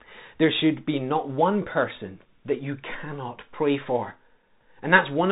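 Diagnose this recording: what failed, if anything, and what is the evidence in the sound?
The Bluetooth CVSD headset codec is at fault at the codec stage, throughout the speech. Nothing passes above 3.8 kHz, s sounds turn scratchy, loud bright passages distort where the adaptive one-bit step cannot keep up, and a granular hiss sits underneath, which fits a 64 kbps CVSD link.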